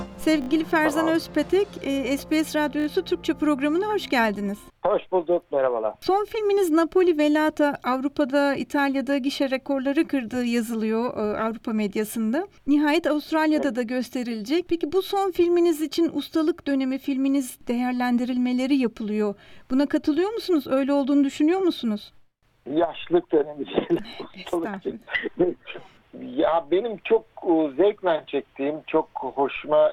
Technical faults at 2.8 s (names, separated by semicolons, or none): repeated buffer